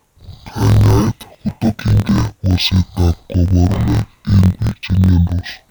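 Throughout, interleaved audio read as planar drops the speech an octave low, doubled and choppy. Each 23.22 ms block is split into halves, leaving a 43.1 Hz stutter.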